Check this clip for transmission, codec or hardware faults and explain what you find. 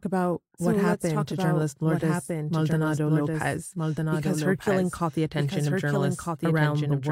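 One fault runs through the whole clip: a doubled audio track. The speech is heard twice, with a second full-band copy trailing by roughly one and a half seconds at somewhat lower level. It is likely a second capture path or misaligned edit. Unlike echo, the copy is single, with no decay or room colour.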